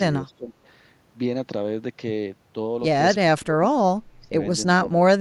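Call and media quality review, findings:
Speech suppressed in double talk, four dips at 0.23–0.54, 3.39–3.68, 4.19–4.35 and 4.79–4.98 s, the later ones drop by up to roughly 25 dB. Likely the echo canceller mistaking the near talker for far-end echo during overlap and ducking the near talker.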